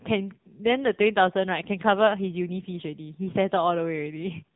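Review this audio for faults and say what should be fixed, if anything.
The AMR narrowband mobile codec damage runs through the whole clip and it's heavy. Nothing gets through above 3.8 kHz, and the speech has a buzzy, synthetic edge from being rebuilt off a few pulses per frame, which fits a low mode around 6.7 kbps. Next time, capture over a wideband path or let AMR-NB run at a higher bitrate mode.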